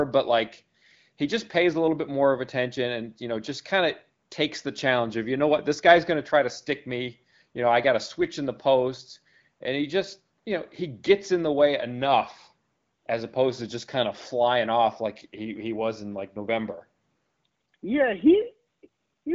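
No technical faults can be heard anywhere in this speech recording. It has passed through the AMR wideband (HD Voice) codec at 15.85 kbit/s, which leaves only light coding damage and no content above about 7.5 kHz.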